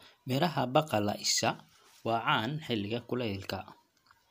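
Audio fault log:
No faults are present in this speech clip.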